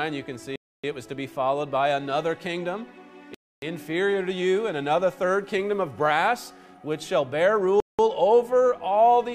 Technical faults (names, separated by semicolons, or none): block of digital silence